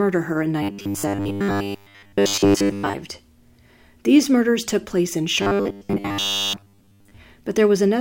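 From 0.63 to 2.94 s, after "her in", and again from 5.42 to 7.17 s, after "murders took place in", the speech becomes a rigid, metallic 100 Hz buzz: robotic sound from repeated short buffers, likely from a 10 ms slice looping while most real audio is skipped.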